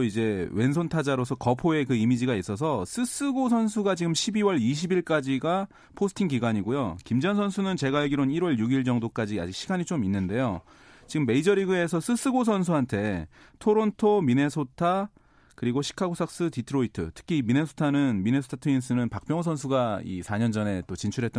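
No technical faults can be heard anywhere in the recording; the speech signal stays continuous and steady throughout.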